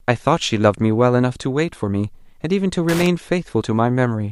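At 2.89 s a burst of loose connector crackle runs for about 0.18 s, to 3.07 s: a worn contact momentarily breaking and remaking, chopping the speech into irregular scratchy crackle. Unlike a single clean digital click, it sounds ragged and uneven throughout.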